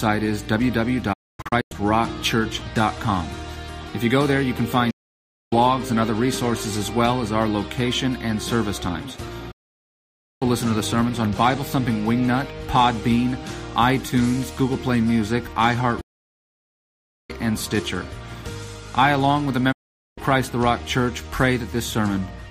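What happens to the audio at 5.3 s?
At 5.3 s the sound sits inside a digital broadcast dropout running from 4.90 s to 5.53 s. The receiver stopped getting good frames and muted its output until clean ones returned. The cut comes with a very fast fade of about 8 ms, so it sounds like an abrupt hole rather than a slow dip. Roughly 0.6 s of programme is simply missing, which points to a run of around nineteen lost frames.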